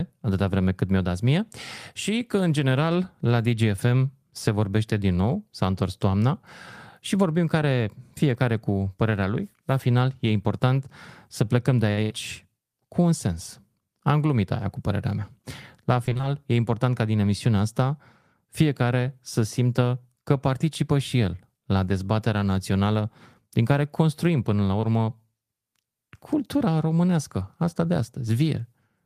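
A speech recording with two network faults. From 16.05 to 16.25 s, just before "e important ca din", repeated packet loss (robotic sound) chops the audio: several holes of up to 20 ms each are patched from the preceding sound, covering half that stretch and giving a choppy texture. At 24.81 to 24.85 s, right after "care construim până la", a short concealed packet loss fills a 20 ms hole by extending the previous sound, leaving a brief smear before the real signal resumes.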